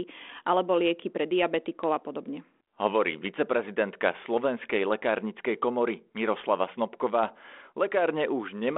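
No technical faults are audible in this speech.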